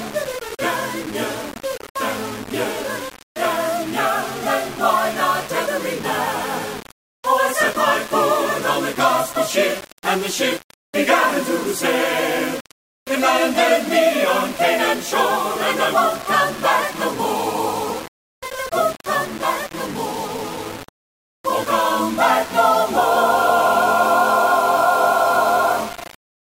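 Throughout, a grainy distortion tracks the sound, with quieter passages turning gritty; this is low bit depth without dither, likely rounding to about 5 bits.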